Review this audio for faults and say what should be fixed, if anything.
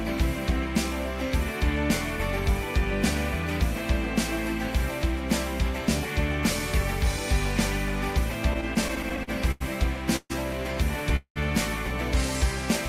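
Repeated stalls (stutter), 8.53 to 9.62 s: packets kept arriving late, so the jitter buffer ran dry eleven times. Each time the last sound was stretched over gaps of up to 90 ms, so the audio drags and stutters.

Call audio freezes at 10.16 s and 11.16 s: packets were likely held up in transit, emptying the buffer. The held sound fades over about 134 ms and 194 ms, with a short silence, before the audio resumes where it stopped.

A steadier network path with less queuing, plus a deeper adaptive jitter buffer, would absorb these delays before they reach the listener.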